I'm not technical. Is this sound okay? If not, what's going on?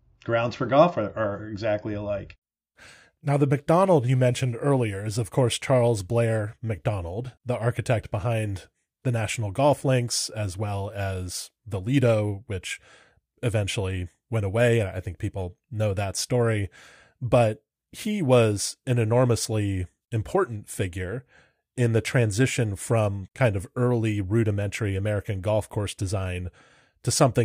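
Yes, the recording has no technical faults to report.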